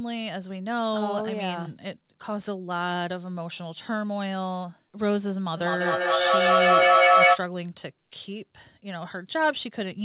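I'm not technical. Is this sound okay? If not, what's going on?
No. From 5.57 to 7.43 seconds there is a feedback echo between two devices. Two nearby devices share the call, and each mic hears the other's speaker. The sound loops back about every fifth of a second, growing louder than the speech.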